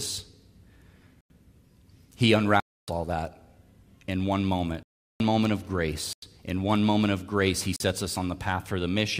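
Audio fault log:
1.21, 2.60, 4.83, 6.13 and 7.76 s: block of digital silence. The speech drops to silence for 93, 279, 372, 93 and 40 ms. Each hole starts and stops abruptly. The 93 ms gaps fit an unfilled 4096-sample buffer.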